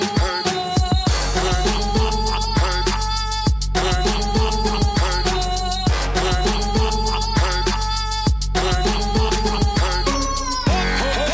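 No technical faults can be heard in this clip. There is nothing in the audio that needs a timestamp or a repair.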